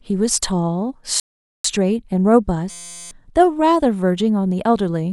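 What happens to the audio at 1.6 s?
At 1.6 s the player is still in a rebuffering stall: it ran out of downloaded audio at 1.20 s and waited for more data. The speech drops to silence until 1.64 s, then resumes exactly where it broke off, adding about 0.45 s without losing anything.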